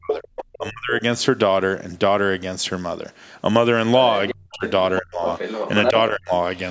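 From 0 to 0.94 s the talker's speech dips hard, by roughly 30 dB at its deepest. This is speech suppressed in double talk. The likely cause is an echo canceller turning everything down while both sides spoke. Between 0.13 and 0.55 s the other side's voice leaks through, about 10 dB below the talker. From 4.09 to 4.99 s it leaks again, fainter. Inside that stretch, 4.31 to 4.64 s, the talker drops by around 40 dB. Another dip follows at 5.01 to 5.22 s. From 5.36 to 5.91 s the leaked voice is as loud as the talker. Then 5.9 to 6.31 s is suppressed again. The leakage is likely residual loudspeaker echo the canceller failed to remove.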